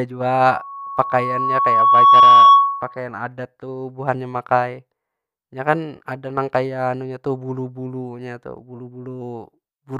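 Loudspeaker feedback squeal runs from 0.46 to 3.0 s in this speech recording. A steady 1.1 kHz tone swells over roughly two seconds to about 15 dB above the speech, because the microphone is picking up its own loudspeaker and the loop gain exceeds unity at that frequency. Periodic USB or driver dropouts follow from 8.58 to 9.58 s: about three ticks, spaced 0.5 s apart, where a tiny sliver of audio, well under a millisecond, is skipped each time a background task stalls the bus or driver.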